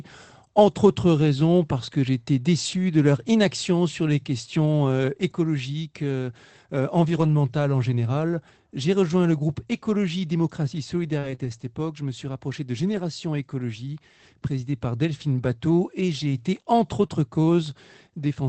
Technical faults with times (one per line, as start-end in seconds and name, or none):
1.87-1.93 lost packet rebuilt from error correction
2.71-2.77 lost packet rebuilt from error correction
7.11-7.33 lost packet rebuilt from error correction
11.19-17.17 scattered short gaps